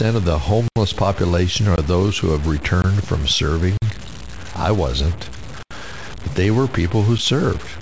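From start to end, the speech carries a grainy, rough distortion that follows the voice. Quiet passages turn gritty, and the softest moments sputter or drop out. The noise sits only about 20 dB below the speech. This is likely low bit depth without dither. The signal was cut down to very few levels and truncated, which fits roughly a 5-bit word. The error moves with the signal. The call-codec band limit, with nothing above 8 kHz, can also be heard.

Six blocks of digital silence cut into the audio. The output drops to silence with no fade, then snaps back. The first comes at 0.68 s and lasts 80 ms, long enough to hear as a hole. A 20 ms gap at 1.76 s falls just before "those who have". Another 20 ms gap at 2.82 s follows "those who have". At 3.77 s a 47 ms hole opens. At 5.63 s an 80 ms gap splits "I wasn't" from "but they were people". At 7.18 s a 7 ms dropout is heard as a single tick. 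Each points to samples that never arrived in time.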